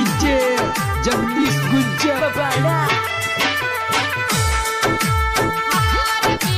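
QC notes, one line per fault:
No faults detected; the audio passes QC with nothing to flag.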